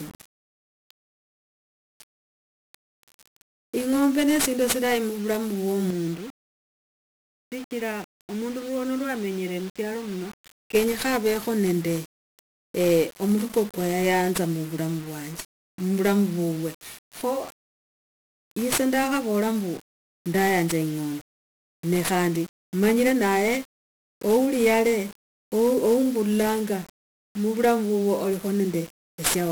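Throughout, heavy 1-bit DFPWM compression makes the speech fuzzy and crackly. Hiss buries the treble, which fits a 48 kbps stream. From 5.90 to 10.75 s the speech turns dull and a little quieter, with nothing above 3.8 kHz and faint new noise. The input was likely switched to a poorer device.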